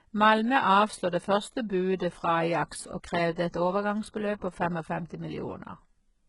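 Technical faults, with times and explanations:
Throughout, HE-AAC compression: The speech sounds heavily coded, likely from HE-AAC at a very low rate, which fits about 12 kbps. Only the lower spectrum carries real detail. The treble is rebuilt by copying lower bands upward under a coarse envelope. That treble is synthetic, and its harmonics do not line up with those below. S sounds turn gritty and lispy. Nothing is present above about 11.1 kHz.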